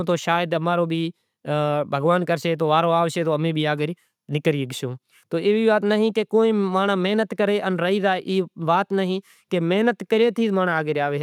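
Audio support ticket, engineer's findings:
Engineer's findings: no fault found in the speech audio on this ticket.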